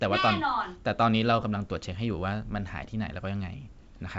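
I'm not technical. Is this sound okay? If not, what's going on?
Yes, this speech recording is fine: it's gone through ordinary wideband phone coding, which keeps it clear and leaves at most a faint trace you'd have to strain to hear, so there's nothing here to worry about.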